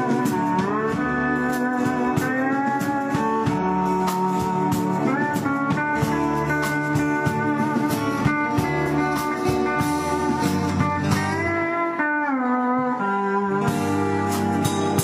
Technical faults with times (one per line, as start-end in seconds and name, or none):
0.89-0.94 damaged data in a compressed stream
3.58-3.64 damaged data in a compressed stream
5.90-5.93 damaged data in a compressed stream
8.83-8.88 damaged data in a compressed stream
11.43-11.49 damaged data in a compressed stream